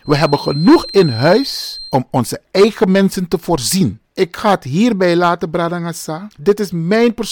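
A feedback whistle runs from 0.0 to 2.0 s, ending just before "onze eigen mensen te". A thin, steady tone near 4.2 kHz sits well below the speech, swelling and fading slowly in level. The likely cause is a loudspeaker-to-microphone loop hovering at the edge of feedback.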